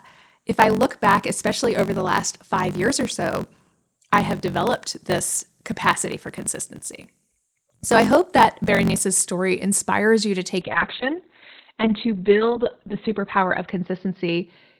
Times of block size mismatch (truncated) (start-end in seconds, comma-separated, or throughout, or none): 0.00-9.05